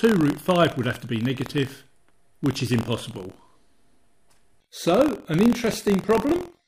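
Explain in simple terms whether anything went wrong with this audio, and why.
Buffer tearing runs through the whole clip, from start to finish. It sounds like a steady robotic buzz of about 43 buzzes per second, riding on top of the sound wherever there is any. The program filling the audio buffer and the hardware playing it have drifted out of step, so a small sliver of each chunk still holds sound from about a twentieth of a second earlier. The buzz rate fits a 1024-sample buffer.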